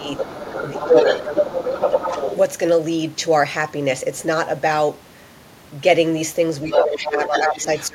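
Other side's voice leaking through runs from 0.0 to 2.36 s at about the same level as the talker, and returns at 6.71–7.08 s (about 5 dB down) and 7.24–7.87 s (about 15 dB down). This is likely loudspeaker echo that the echo canceller failed to remove from the microphone, heard as a second voice.

Speech suppressed in double talk occurs at 0.0–0.08 s, 0.76–0.95 s, 6.68–7.55 s and 7.88–7.95 s, with the talker dipping by roughly 5 to 20 dB. The likely cause is the canceller ducking both voices while they overlapped.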